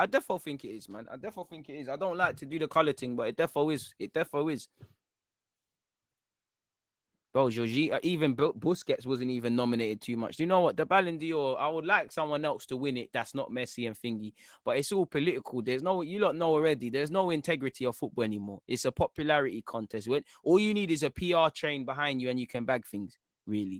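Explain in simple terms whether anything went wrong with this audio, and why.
Throughout the clip, from start to finish, the speech carries plainly audible Opus voice compression. The codec rebuilds the lower range from a rough prediction and adds a thin separate layer for the highs. With so little data for either, everything comes out grainy and slightly robotic.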